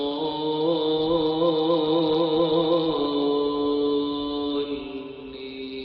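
No technical faults can be heard anywhere in the recording; the signal stays steady and intact throughout.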